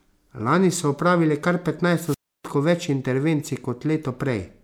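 At 2.04 s the speech gives way to a brief surge of hiss, then a hole of near silence lasting about 0.3 s before it returns by 2.48 s. This is a wireless microphone squelch dropout: the FM radio link faded and the receiver's squelch muted the output.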